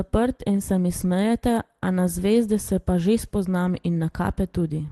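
A speech recording with no technical faults to report. It has come through a WebRTC call path, and the upper range stops at about 12 kHz, which fits the Opus codec running at a modest bitrate of around 20 kbps.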